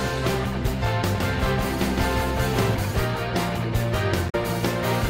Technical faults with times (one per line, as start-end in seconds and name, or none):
1.15-2.75 doubled audio track
4.26-4.35 damaged data in a compressed stream